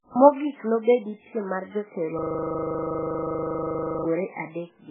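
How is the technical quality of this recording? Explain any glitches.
The recording has two clear technical faults. The whole clip shows heavy codec damage. A section of the speech also freezes into a loop.

The MP3 compression damage runs throughout. Nothing is heard above about 3.6 kHz. The sound is watery and swirly, with smeared attacks. This fits a very low bitrate, around 8 kbps. The likely cause is an MP3 encoder that lacked bits. It dropped weak frequency lines, so they flicker on and off from frame to frame. It also cut all the treble above that point.

A system hang loop runs from 2.19 to 4.05 s, right after "piem mar jotelo". One 40 ms piece of audio repeats exactly, 46 times. That gives a rapid stutter at 25 Hz in place of the speech. The computer or driver froze. The sound hardware kept replaying the same short ring buffer until the system recovered.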